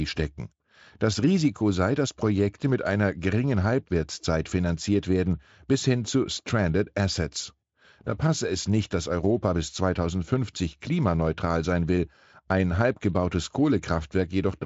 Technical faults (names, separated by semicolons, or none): none